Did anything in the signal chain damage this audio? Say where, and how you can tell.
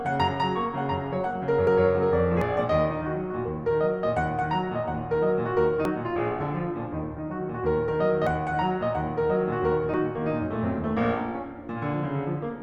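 Yes. The music skips ahead at 1.67, 2.42, 5.85, 8.27 and 9.94 s, with no gap. Likely a dropped buffer (overrun) at the driver stage.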